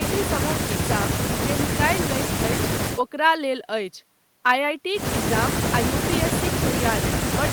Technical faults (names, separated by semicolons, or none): none